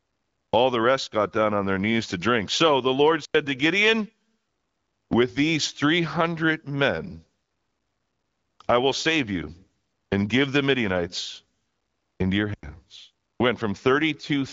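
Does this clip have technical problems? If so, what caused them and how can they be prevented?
Yes. Two blocks of digital silence, at 3.25 to 3.34 s and 12.54 to 12.63 s, each about 93 ms, cut the speech abruptly to silence and back, leaving a short hole. The matching lengths fit a 4096-sample output buffer that wasn't filled in time. Giving the audio thread higher priority or a larger buffer margin prevents this.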